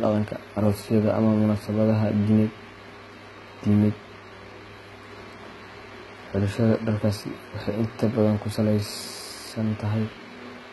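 From start to finish, the s sounds and other upper detail come across gritty and metallic, with a lisping edge. The treble is synthetic, and nothing is heard above about 11.8 kHz. The damage is heavy throughout. The likely cause is HE-AAC compression, consistent with a v2 stream at around 16 kbps. Only the lower spectrum is properly coded, and the top is rebuilt by copying lower bands upward, so its harmonics no longer line up with the real ones.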